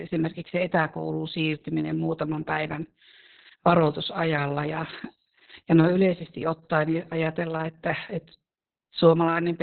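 Opus voice compression throughout: speech cut off above 4.2 kHz, with coarse excitation coding making it muffled, hoarse and slightly robotic, which fits about 6 kbps.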